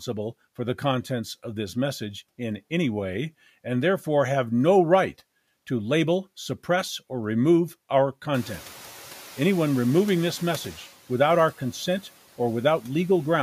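At 8.34 s, right after "suppress or remove our", the noise suppressor is catching up. The room noise jumps by about 22 dB at around eight and a half seconds. The suppressor's noise estimate lags behind that rise. So the noise passes through with little reduction at first. Over about 2.45 s it sinks by about 6 dB as the estimate adapts. It settles by 10.79 s, before "without our consent". The room noise then stays about 22 dB below the speech.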